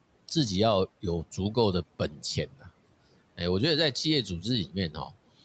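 From 1.99 to 2.22 s, 2.51 to 2.68 s and 4.91 to 5.15 s, speech is cut by the noise suppressor. It mistook parts of the speech for room noise and lowered them by about 8, 13 and 11 dB. Brief stretches sound swallowed and faint.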